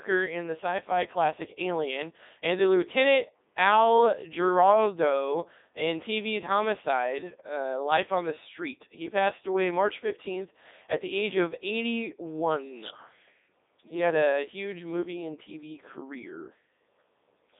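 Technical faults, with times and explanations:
Throughout: Codec 2 vocoder. The speech has the robotic, buzzy character of sine-wave resynthesis: the decoder rebuilds the voice from pitch, voicing, energy and a coarse spectral envelope, so the original waveform and its natural texture are lost, and the damage is heavy. The band runs from 250 Hz to 3.7 kHz with nothing above 3.8 kHz, and the quality fits Codec 2's highest 3.2 kbit/s mode.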